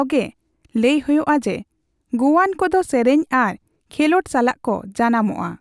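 A short speech recording with no technical fault to point to. Nothing in it calls for a time, a value or a cause.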